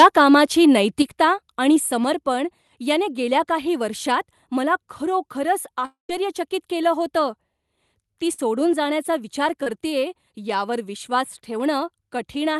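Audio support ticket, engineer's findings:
Microphone volume stepped down at 1.02 s: voice and background both fall about 5 dB in one step. Likely cause is the call client's automatic input-gain control cutting device volume. Waveform envelope shows a clean step down, and the spectrogram darkens evenly across all bands.

Long network dropout, 5.85 to 6.10 s: roughly a quarter second of audio is lost. The receiver carries the last sound forward as a fading buzz or hiss, then about 130 ms of near-silence, and the audio resumes past the gap. Likely cause is a network stall upstream of the jitter buffer. The spectrogram shows smeared, decaying energy, then a blank band.

Burst of packet loss, 8.33 to 8.39 s: about 50 ms of audio missing. Jitter-buffer concealment extends the preceding sound as a held, fading tone or hiss, then jumps ahead. The waveform shows a repetitive, shrinking cycle. On the spectrogram, flat horizontal streaks break the normal movement.

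Short concealed packet loss, 9.63 to 9.67 s: about 30 ms never reached the decoder in time. The packet-loss concealment synthesised a brief continuation and blended back into the real audio, which is heard as a quick smear or wobble. The spectrogram shows a narrow smudged column. The Opus path's roughly 12 kHz upper band edge is visible throughout.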